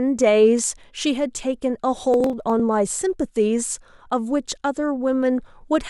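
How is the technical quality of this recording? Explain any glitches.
The recording has one glitch. Processor overload crackle from 2.14 to 2.6 s: the processor missed about ten buffers of around 10 ms each, skipping them and leaving a gritty, tearing crackle.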